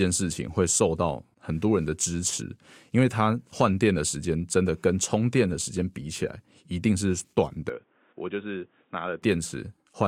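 At 7.69 s the speech abruptly turns dull and boxy, with nothing above 3.8 kHz, a level drop of roughly 10 dB, and a new background noise sitting about 35 dB below the signal. There is no gap at the switch. At 9.22 s the full sound returns. The likely cause is the input switching to a poorer device. A simple low-pass filter wouldn't bring its own noise floor and level change along with the narrower band.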